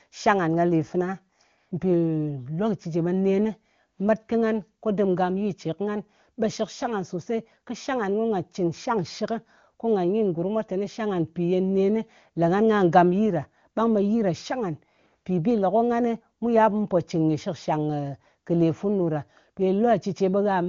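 It's a speech clip over an AMR wideband (HD Voice) link, which sounds clean and wideband, in line with one of its higher-rate modes. The fault is a burst of AMR comfort noise from about 1.57 to 1.71 s: for roughly 140 ms the sender decided nobody was talking and stopped sending speech frames, so the receiver padded the gap with smooth synthetic hiss. You hear the real background drop out and a flat, steady noise briefly take its place.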